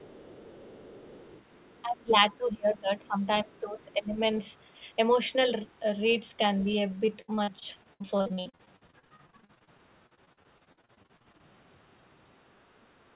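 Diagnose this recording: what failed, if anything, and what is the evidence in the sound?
From the start to 1.82 s there's a faint second voice under the speech, about 25 dB down, and another quick scrap of it at 3.02–3.07 s, about 35 dB down. That's the other side's voice leaking through. It's a call-processing fault, most likely the far end coming out of the loudspeaker and back into the mic, with the echo canceller not stripping all of it out.

From 1.82 to 4.2 s the talker's level keeps sagging, bottoming out about 20 dB down, with roughly two seconds of that stretch affected in all. This is speech suppressed in double talk. It's also call processing: with both sides talking at once, the canceller likely couldn't tell the near voice from the echo and ducked everything.

From 7.06 to 11.41 s the sound turns choppy, with pieces missing. That's repeated packet loss at the network and jitter buffer stage. 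Dozens of short holes, the longest 67 ms, get patched by stretching out whatever came just before, and about a third of that span ends up concealed. The next hole arrives before the last patch fades, so you hear that stutter. The dull, narrowband tone with nothing above 4 kHz fits the G.711 path it went through.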